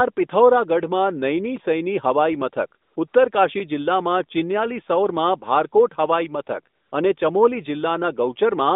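At 2.82 to 2.96 s, again at 3.08 to 3.14 s, and at 6.76 to 6.92 s, the real background of this narrowband speech drops out and a smooth, steady hiss takes its place for 140, 60 and 160 ms. This is AMR comfort noise. The sender judged these moments silent and stopped sending speech frames, and the receiver filled each gap with synthetic noise built from a rough estimate of the background's level and spectrum.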